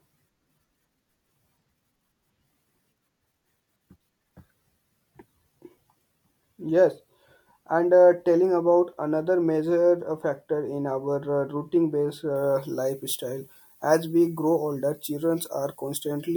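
From 12.36 s, after "routine based", pre-emphasis is left on: treble lifted about 14 dB at 10 kHz, fitting a 75 µs FM curve, sounds thin and sibilant, with a brightened upper spectrogram.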